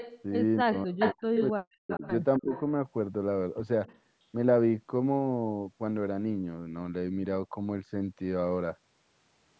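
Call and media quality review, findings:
Echo leak. Delayed copy of the speech, about 262 ms behind, at 0.0–0.22, 0.72–1.49, 1.89–2.08, 2.38–2.61 and 3.86–4.0 s. Loudest at 0.72–1.49 s, near full speech level. Elsewhere well below. Likely the far-end echo canceller passing residual loudspeaker pickup back.

Speech suppressed in double talk. Talker cuts out in pieces at 0.62–1.34 and 1.52–2.02 s, dips as deep as around 40 dB. Milder dip, near 15 dB, at 2.39–2.53 s. Coincides with echo bursts. Likely the echo suppressor ducking near-end speech during overlap.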